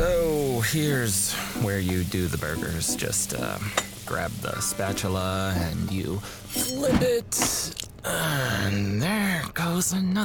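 From 2.11 s to 10.13 s a train of clicks ticks steadily at 6.5 per second, about fifty near signal level, likely from interference; near-identical, evenly spaced pulses, unlike random crackle.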